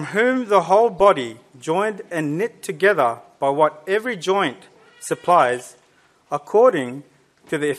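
Corrupt frame decoded at 0.95–1.00 s, 5.59–5.61 s and 6.89 s: flipped bits in a few compressed frames were decoded rather than concealed, so misread gains and codes put energy in the wrong frequency bands, giving short chirps and blips peaking around -30 dBFS.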